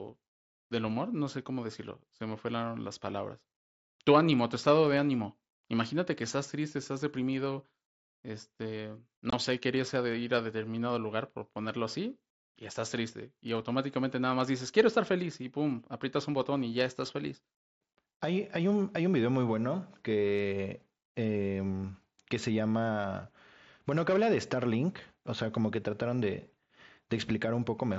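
Right after "triste estás deprimido este", 9.30 to 9.33 s, there's unconcealed Bluetooth headset packet loss: a 22.5 ms abrupt-edged hole over the mSBC link, fitting three lost frames.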